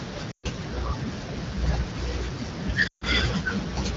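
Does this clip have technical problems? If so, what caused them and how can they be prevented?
Yes. Lost AMR speech frames at 0.31–0.46 s and 2.87–3.04 s: radio errors corrupted runs of frames, so the wideband decoder kept repeating the last good pitch and vocal tract settings at falling gain, dropping the sound to near silence within two frames before speech resumed weakly. Better radio coverage, stronger channel coding or a more robust lower codec mode under poor signal conditions would prevent these gaps.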